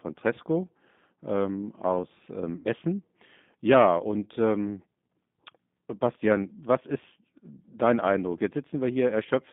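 Throughout, the speech passes through the G.729 codec at 8 kbit/s. It rebuilds each 10 ms frame from a vocal tract filter, a pitch predictor and a few pulses, and the line is band-limited to about 150 Hz to 3.6 kHz. The result is plainly rough, synthetic and dull.

From 2.56 to 2.68 s, just after "ähm aus ähm", there is VoIP packet loss concealed by the speech codec. About 90 ms of audio went missing, which fits three lost packets. The decoder extrapolated from its last pitch and filter state, so the sound is stretched and fades, and the voice stays weak or distorted for tens of milliseconds or more after packets return.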